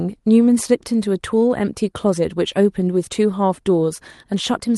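No technical faults occur in the speech here; it comes through an ordinary call path working as it should.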